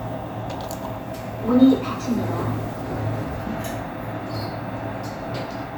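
No technical faults are audible anywhere in this recording of sounds.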